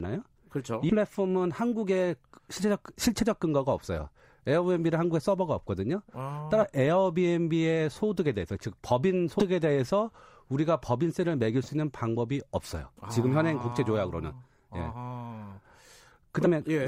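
Compressed frames skipped at 0.89–0.94 s, 6.63 s, 9.39–9.43 s and 16.45–16.49 s: the speech jumps ahead in steps that fit 20 ms frames, losing roughly a fifth of a second at first and less later.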